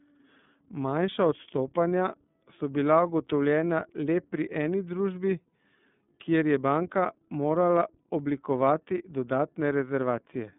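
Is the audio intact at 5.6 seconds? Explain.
No, iLBC coding runs through the whole clip, 5.6 s included. Each 30 ms frame's excitation is coded independently, fitting its 13.33 kbps mode, so the speech sounds rough and synthetic, with nothing above 3.7 kHz.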